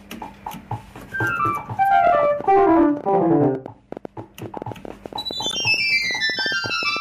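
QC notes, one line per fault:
2.07–6.97 s, train of clicks: likely interference or a faulty connection or power supply injecting pulses, about 8.6 per second at an uneven pace, roughly 40 in all, peaking around 5 dB above the sound.
5.49–5.55 s, corrupt frame decoded: the decoder played about two bit-damaged compressed frames, misplacing energy across frequencies to make a brief glitch near -15 dBFS.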